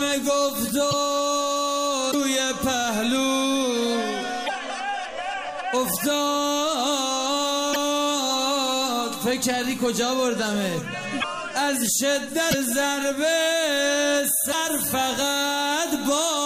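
At 0.90–0.93, 2.10–2.15, 4.46–4.50, 7.72–7.77, 11.20–11.24, 12.50–12.55 and 14.51–14.54 s the sound skips ahead with a brief chirp, noise burst or short hole. That's likely a broken MP3 bit reservoir: frames dropped, so the next ones decode against the wrong borrowed bytes. Each glitch lasts about one or two 26 ms frames.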